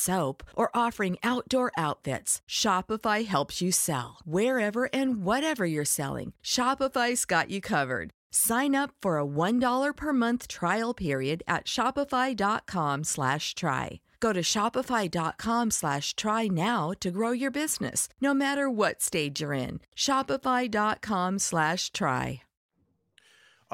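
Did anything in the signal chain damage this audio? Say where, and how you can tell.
No, nothing along the way seems to have harmed this speech recording; there's simply nothing here to point to at any stage of the chain.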